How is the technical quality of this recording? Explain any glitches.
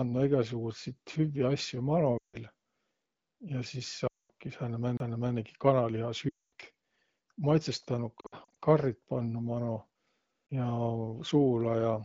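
The speech carries the light softening of AMR wideband (HD Voice) coding at 15.85 kbit/s, and two kinds of glitch break into it.

Lost AMR speech frames: at 2.17 to 2.37 s, 4.07 to 4.30 s and 6.29 to 6.45 s, with about 160, 220 and 240 ms lost, the voice drops to near silence within two frames before returning weak or rough. At 8.20 to 8.55 s, short dropouts of up to 60 ms spread over about 360 ms cause a stuttering warble. Radio errors corrupted the frames, so the decoder repeated the last good pitch and vocal tract settings at falling gain.

CD skip: at 4.97 s and 10.47 s, a mute of about 30 ms is followed by the sound resuming from a different point. A knock or a flaw sent the laser onto another turn of the disc's spiral, so playback jumped forward or back by whole turns.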